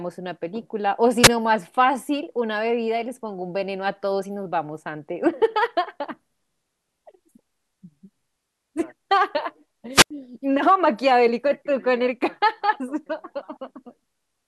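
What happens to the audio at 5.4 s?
Nothing goes wrong at 5.4 s; the speech runs on cleanly through that moment with no break, click, dropout or other audible fault.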